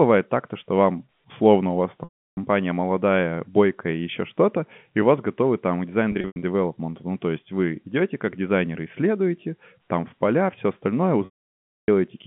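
Speech over a narrowband telephone line drops into a briefly held, buzzy tone that fades to silence at 2.04–2.37 s, 6.12–6.42 s (scattered short gaps) and 11.25–11.88 s. This is packet loss with pitch repetition: the receiver loops the last pitch period to cover the missing audio, then fades it out.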